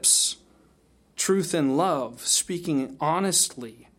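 Nothing stood out on listening to this speech clip.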